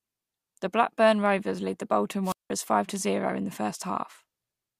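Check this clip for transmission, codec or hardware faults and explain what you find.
There's one fault here, a wireless microphone squelch dropout between about 2.24 and 2.50 s, right after "lead the bolton" and before "five to zero in". The radio link from an analogue FM mic fades, so hiss climbs briefly until the receiver's squelch decides the signal's too weak and shuts the output off. You get a short swell of static, then a hole of near silence lasting 0.18 s, then the speech picks up again.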